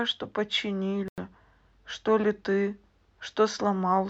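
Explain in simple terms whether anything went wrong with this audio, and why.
At 1.08 seconds the speech drops out completely for about a tenth of a second, then carries on at 1.18 seconds. This is most likely a Bluetooth stall. When radio interference holds up the wireless link, the earphones keep playing from their small store of audio until it runs empty. Then they go silent for roughly 96 ms until the delayed data finally gets through, and playback resumes.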